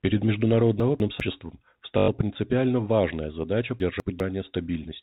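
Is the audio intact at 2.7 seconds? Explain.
Yes, the audio is intact at 2.7 seconds: nothing is disrupted there, and the telephone-band G.711 coding plays through as it should.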